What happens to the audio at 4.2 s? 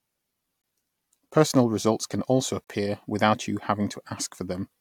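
At 4.2 s the speech carries on intact, with no dropout, click, distortion or other fault at that point.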